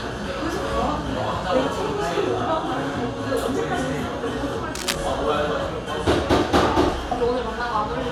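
A short clip of sounds carries one burst of cable scratch noise. It runs from 4.75 to 4.95 s, about 0.2 s. It is heard as a rough, uneven scratching laid over the sound. It is loud, only around 5 dB below the sound itself. The likely cause is a worn cable, connector or control being moved. Its contact resistance jumps about quickly, and that adds dense, irregular bursts of noise to the signal.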